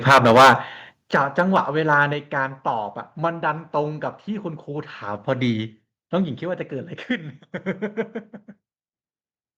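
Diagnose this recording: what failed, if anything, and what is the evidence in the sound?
Microphone overload, at the converter stage: the input was likely set so high that peaks ran past full scale. From 0.07 to 0.53 s the level is about 13 dB over, flattening roughly a fifth of samples into harsh crackle; milder clipping follows at 1.15–1.6 s and 1.9–2.03 s, about 3 dB and 2 dB over.

Microphone volume stepped down, in call processing: automatic gain control likely reacted to the clipping by cutting the input level in single steps. Voice and background drop abruptly at 0.12 s by about 3 dB, at 1.11 s by about 10 dB, and at 2.13 s by about 4 dB.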